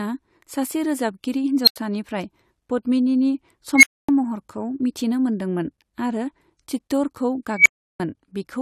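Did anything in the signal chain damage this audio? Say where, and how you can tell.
Yes: an unstable filter in the processing stage. At 1.64–1.76 s, 3.76–4.09 s and 7.51–8.00 s, a tone near 4 kHz, then 2 kHz twice, swells within 34, 75 and 145 ms. It then drops to silence for 85, 256 and 341 ms as the runaway recursive filter overflows and resets. Acoustic feedback howl wouldn't cut out abruptly like that.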